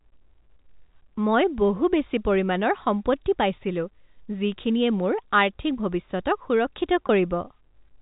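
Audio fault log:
7.07–7.09 s, packet loss with pitch repetition: about 20 ms of audio went missing in transit, which fits two 10 ms packets. The receiver filled the hole by replaying the last pitch cycle, so the sound briefly holds on a slightly buzzy, frozen tone.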